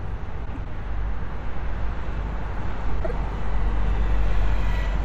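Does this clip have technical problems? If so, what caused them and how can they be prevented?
Yes. Frames out of order occur twice, from 0.45 to 0.67 s and from 3.00 to 3.11 s. In each spot, two adjacent runs of frames were swapped before decoding. That fits runs of 96 ms in the first spot and 48 ms in the second. The swapped halves produce a brief garbled flutter. Nothing is lost, only reordered. Using sequence numbers and a reordering jitter buffer before the decoder would prevent it.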